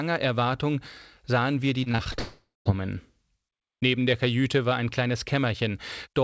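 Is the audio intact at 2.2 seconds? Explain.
No. Repeated packet loss (robotic sound) runs from 1.84 to 2.20 s, just after "sahen wir die": six short gaps, the longest 26 ms, are each patched by stretching the preceding sound, so about a third of that span is concealed and comes across choppy.

From 2.20 to 2.67 s the audio turns into a fading continuation of the last sound, then about 150 ms of silence before it resumes with roughly 460 ms missing. This is likely a long network dropout, with the receiver filling the hole until it gives up.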